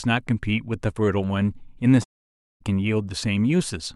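From 2.03 to 2.62 s the speech fades into a soft-edged 0.58 s silence, AAC frame loss with muting: the decoder zeroed missing frames.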